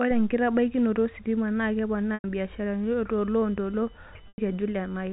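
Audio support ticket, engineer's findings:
Packet loss with pitch repetition at 2.14–2.24 s and 4.28–4.38 s. 100 ms gaps, consistent with five 20 ms packets. Last pitch period repeated, buzzy, fading to silence, then cross-fades back.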